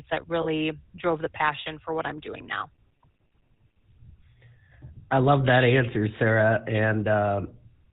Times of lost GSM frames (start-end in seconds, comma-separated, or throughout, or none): 0.42-0.47